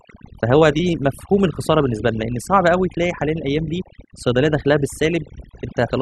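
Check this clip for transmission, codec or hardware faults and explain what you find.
One fault runs through the whole speech clip: overdone noise removal. A noise reduction stage was set too aggressively. It cuts individual frequency bands near its noise estimate, taking quiet speech detail too. The background drops and breaks up into twinkling specks.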